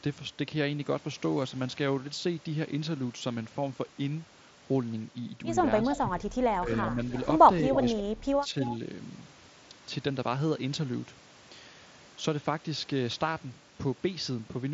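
From 5.87 to 8.55 s, speech suppressed in double talk dips the voice at 5.87, 6.59, 7.61 and 7.97 s. Drops reach about 20, 10, 5 and 30 dB, likely from the echo canceller ducking both talkers. Interleaved with these, echo leak brings delayed repeats at 5.92, 7.15, 7.74 and 8.61 s. Each comes about 310 ms late, at about 5 to 20 dB below the speech, likely residue the canceller missed. Through it all, the mSBC headset audio stops near 7.7 kHz.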